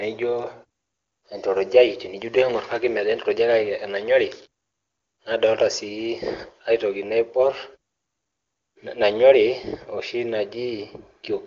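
Speech, with no audible technical faults.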